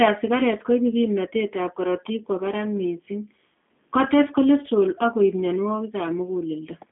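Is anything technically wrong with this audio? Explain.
Yes. G.729 codec damage runs throughout. The speech is rebuilt from a vocal-tract filter, pitch predictor and sparse pulses, which fits an 8 kbit/s G.729 stream. The band is confined to about 200 Hz–3.6 kHz with nothing above 3.8 kHz, so the voice sounds muffled, rough and plainly synthetic.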